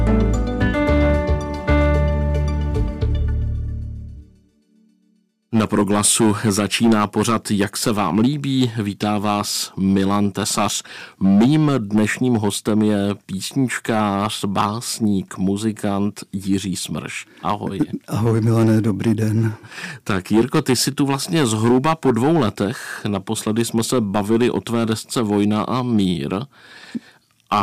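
From start to finish the audio carries hard clipping. The signal is driven about 9 dB beyond what one stage in the chain can pass, so the peaks are sliced flat and roughly a few percent of the waveform sits pinned at the ceiling. Those flat tops spray harmonics high up the spectrum, giving a gritty crackle that tracks the loud moments. Unlike soft saturation, which rounds peaks into a warm thickening, this edge is abrupt and brittle, and it appears only on peaks, never in quiet passages.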